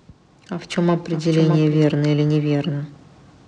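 Periodic clock jitter runs throughout. The converter clock wobbles at roughly 1.5 kHz, adding sidebands that give the speech a rough, metallic edge.

A doubled audio track is already under way at the start and ends abruptly at 1.84 s. It trails by roughly 0.7 s and is about 5 dB quieter, likely from a slower second capture path.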